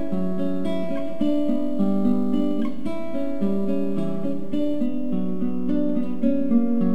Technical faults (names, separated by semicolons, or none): crude rate conversion